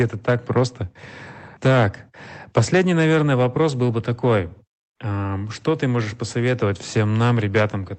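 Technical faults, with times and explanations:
0.00–0.61 s, 1.66–1.85 s, 4.24–4.39 s and 5.68–5.72 s: hard clipping. The speech peaks go about 5, 6, 3 and 2 dB beyond what the signal chain can carry, so their tops are cut flat. Those squared-off peaks create harmonics high in the spectrum, heard as crackle and a rough fuzz on loud syllables. The first two bursts are the harshest, and the brief last one ends just before "ты можешь".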